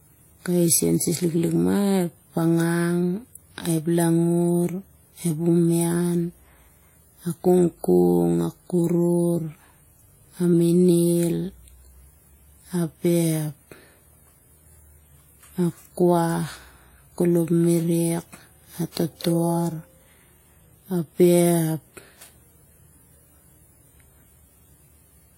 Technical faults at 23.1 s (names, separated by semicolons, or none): transcoding between lossy codecs